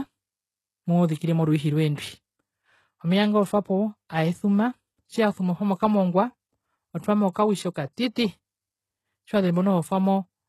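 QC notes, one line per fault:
Throughout: HE-AAC compression. The speech has a bright but artificial-sounding treble, with s sounds that come across gritty, lispy and metallic, plainly audible damage, and nothing at all above 12.3 kHz. The likely cause is HE-AAC coding at a low rate that fits about 16 kbps. Only the lower spectrum is truly coded, while the upper band is rebuilt by copying lower bands upward under a coarse envelope, so its harmonics fail to line up with the real ones.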